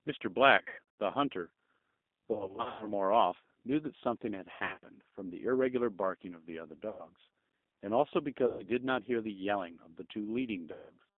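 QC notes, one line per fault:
Throughout: G.729 codec. The whole clip carries that 8 kbit/s VoIP sound, with a line band running about 200 Hz to 3.6 kHz, so there is no air or sibilance up top. The codec damage is plainly audible. The speech is rebuilt from a vocal tract filter plus a pitch predictor and a handful of pulses per frame, which gives that slightly rough, synthetic grain on every syllable.
0.58–0.79 s, 2.32–2.94 s, 4.54–4.78 s, 6.89–7.09 s, 8.47–8.63 s and 10.72–10.91 s: VoIP packet loss concealed by the speech codec. The decoder papers over the gaps by stretching its last pitch and filter into a fading buzzy or noisy smear. The first three are scattered dropouts, losing 280, 320 and 180 ms, with runs up to 120 ms, which fits 20 ms packets. The last three are single holes of 100, 120 and 180 ms. Each leaves a weak or distorted tail before the speech firms up again.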